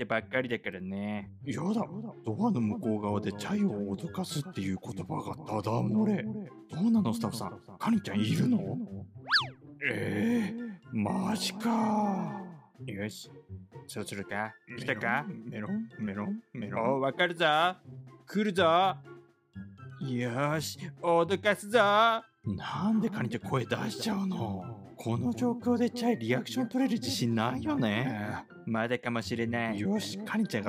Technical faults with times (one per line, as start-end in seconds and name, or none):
24.21-28.45 sample clock jitter